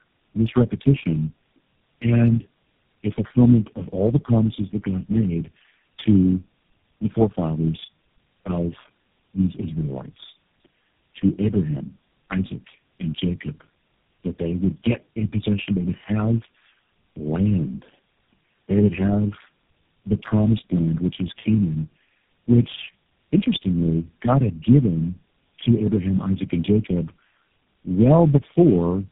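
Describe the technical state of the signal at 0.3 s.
At 0.3 s, as throughout the clip, the speech shows tandem speech coding: it sounds as if it was decoded and re-encoded through about four low-rate speech codecs in a row. Each pass degrades the last, leaving it rough, muffled and warbly. A spectrogram shows nothing above 3.6 kHz.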